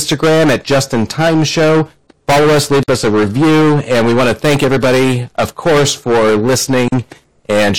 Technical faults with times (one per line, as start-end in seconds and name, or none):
0.00-7.78 hard clipping
2.83-2.88 gap at a join of encoded pieces
6.88-6.92 gap at a join of encoded pieces